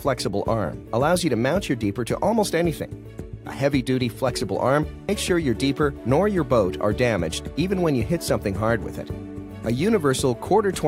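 At 5.09 s, compressed frames are skipped. What sounds like one 93 ms frame goes missing, so the audio jumps ahead by about 100 ms.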